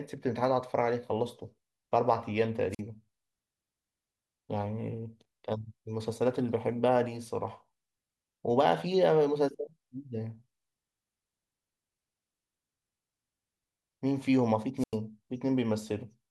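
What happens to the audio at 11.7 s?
Nothing goes wrong at 11.7 s; the speech carries on intact through that point, with no dropout, click, glitch or other fault.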